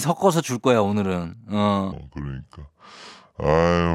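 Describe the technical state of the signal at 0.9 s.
At 0.9 s the speech signal is intact, with no audible fault at that moment.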